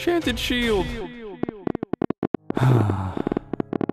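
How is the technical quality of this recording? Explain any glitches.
The recording has two kinds of glitch: brief jumps where compressed frames were skipped, and a train of clicks over most of the second half.

Compressed frames skipped occur at 1.0 s and 3.42 s. The first jump loses roughly 50 ms, about two frames; the second loses roughly 20 ms, about one. Frames of 23.2 ms were dropped or rejected by the decoder, so the sound leaps forward at the join. Unlike the clicks, this skips audio.

A train of clicks runs from 1.43 s to 3.90 s, around thirty pulses at about 13.3 per second, irregularly spaced and roughly 15 dB above the signal. They are likely from electrical interference or a faulty connection. Similar-shaped pulses tick over the sound without removing any of it.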